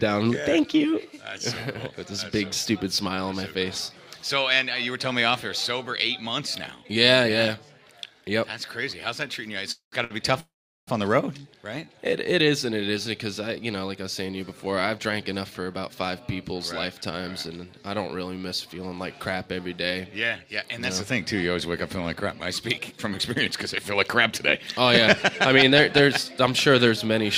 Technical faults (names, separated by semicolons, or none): call audio freeze; short stall from a late packet; jitter buffer speed-up